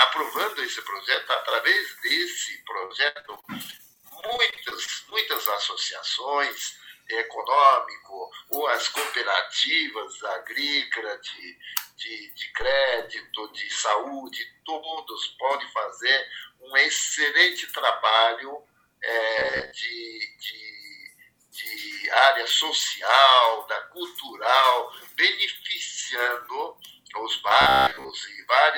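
Packets were repeatedly lost or late from 2.85 to 5.13 s, with about two dozen holes (the longest 75 ms) each patched by extending the last sound. Roughly a quarter of that stretch is filled-in material, so the audio turns choppy and robotic. At 19.39 to 19.73 s and again at 27.61 to 28.11 s, the cause is likely new audio arriving too seldom, so a short buffer is replayed while most of the real sound is skipped. The repeats impose a rigid 66.7 Hz buzz, which fits a buffer about 15 ms long.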